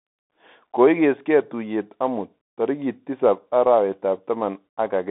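Throughout, the speech sounds thin and boxed in, with scratchy s sounds, a granular hiss underneath, and nothing above 3.8 kHz. This is the Bluetooth CVSD headset codec: a one-bit delta coder, consistent with a 64 kbps link, whose adaptive step lags loud high sounds, within roughly 200 Hz to 3.6 kHz.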